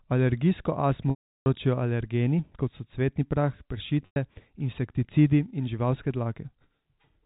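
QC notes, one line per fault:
1.10–1.46 s and 4.06–4.16 s, packet loss with pitch repetition: 360 ms, then 100 ms, of packets were lost, which fits 20 ms packets. The receiver looped the last pitch period, so the long gap fades to silence before "alergeni kot so cvetni" cross-fades back, and the short gap after "kot so cvetni prah" is a brief buzzy hold.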